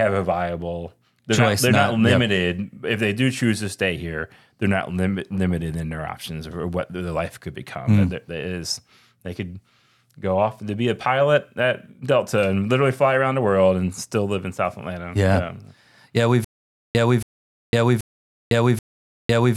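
The stream likely stalled from 16.45 s to the end, replaying its last fragment at each retry: a stutter with silent gaps. A 276 ms burst of speech returns four times, every 781 ms, with 505 ms of digital silence between, and the audio due in that time is lost.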